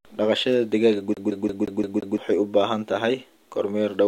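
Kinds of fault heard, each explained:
CD stuck on one turn: from 1.14 to 2.18 s the speech catches on a 173 ms slice that plays six times, each pass ending in a brief mute as the laser jumps back a track, the quick, even stutter of a skipping disc, released just before "u baahan".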